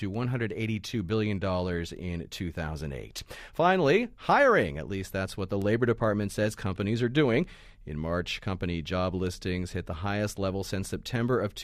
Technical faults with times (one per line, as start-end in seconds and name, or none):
0.14-11.09 word clock ticks